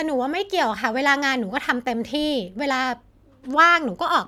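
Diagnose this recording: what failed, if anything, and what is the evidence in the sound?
Nothing failed in this recording, and there is no evidence in the sound of a fault at any stage.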